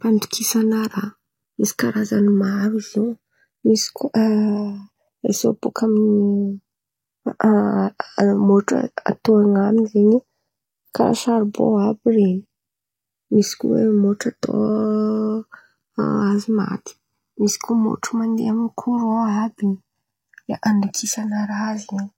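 Speech recorded on two channels whose delay slowly slides across the clip, the fault known as channels drifting apart. The two sides come from devices on separate clocks, differing by around 100 parts per million, so the offset grows to roughly a millisecond and a half by the end. Summed to mono, this produces slow flanging. On a spectrogram, comb notches sweep steadily down through the spectrum.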